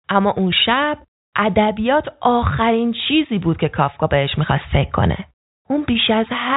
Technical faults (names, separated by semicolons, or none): none